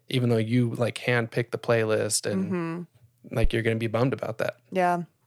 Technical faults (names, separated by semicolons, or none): phantom power thump